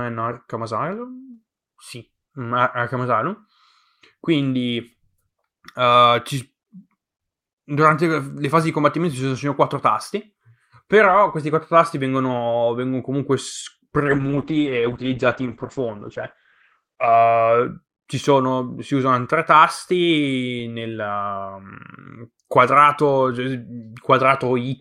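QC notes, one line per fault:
14.05–17.71 s, call bitrate drop: the encoder starved, so audio turns rough and muffled above 8 kHz for about three seconds, fitting a fall near 9 kbps, recovering before "sono si usano tre".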